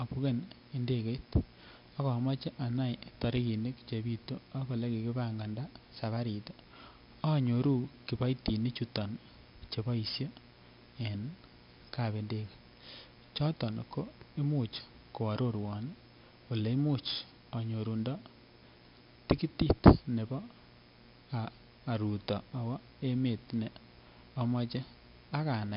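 Right from the start and all the way through there's mains buzz, a raspy 60 Hz hum with harmonics stacked above it, sitting roughly 30 dB under the speech. On top of that, 4-bit ADPCM compression has left heavy gritty hiss riding every loud syllable and smeared attacks, with nothing above 5.3 kHz, which fits a low-rate stream around 44 kbps.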